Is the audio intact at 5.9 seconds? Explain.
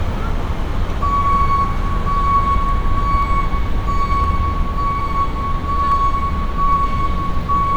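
No, dropped samples at 5.92 s: a few samples, likely lost from the stream, make the waveform jump abruptly, producing a single sharp click.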